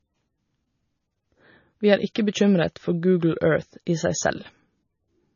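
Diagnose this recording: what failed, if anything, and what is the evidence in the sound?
The failure is at the codec stage: low-bitrate audio saved at a high bitrate. Throughout the speech there is nothing above 7 kHz, and a spectrogram shows a flat ceiling there from start to finish, with the first encoding's artefacts still present below it. That band limit and those artefacts point to a first MP3 pass at roughly 23 kbit/s, likely later re-encoded at a high rate such as 256 kbit/s, which keeps the damage but cannot restore what was removed.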